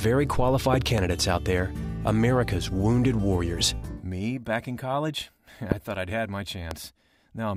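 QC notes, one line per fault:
0.74–1.00 s, loud pop: a double pop, two sharp hits about 15 dB over the sound, which carries on underneath. Likely a voltage step from a switch or plug glitch.
5.72–5.74 s and 6.71–6.73 s, loud pop: single sharp thumps, about 20 dB then 15 dB above the sound, likely from a brief static or driver voltage spike hitting the chain.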